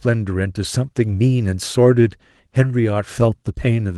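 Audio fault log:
No faults are present; the speech signal carries only the light coding of Opus voice compression in hybrid mode at 24 kbps, with full bandwidth kept.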